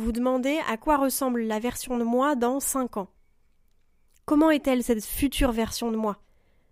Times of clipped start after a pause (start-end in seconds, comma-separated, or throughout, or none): none